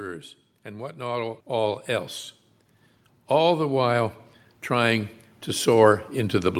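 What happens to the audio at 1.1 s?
At 1.1 s, automatic gain rising is under way, from 0.63 to 2.17 s. The gain control lifts a quiet input by about 6 dB, so speech and background swell together.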